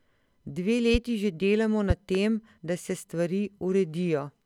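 At 0.94 to 0.97 s a single loud pop lands on the speech, peaking around 10 dB above it. From 1.90 to 2.18 s a second event brings two pops in quick succession, the stronger near 15 dB above the speech. Each is most likely a sudden voltage step, perhaps from a switch, static or a driver glitch, shaped into a thump by the circuits downstream. Unlike a dropout or an edit glitch, the speech carries on unbroken underneath each pop.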